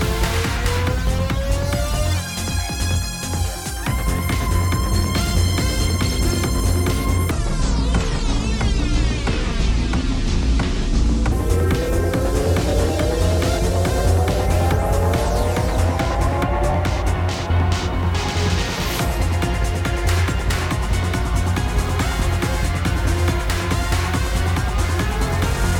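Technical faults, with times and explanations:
7.31–11.32 s: section at the wrong speed. The audio runs at 0.65 times its proper rate, so it drags and sits roughly seven semitones lower, likely from being played against the wrong clock. On a spectrogram, harmonics shift downward and events stretch wider; the waveform looks drawn out.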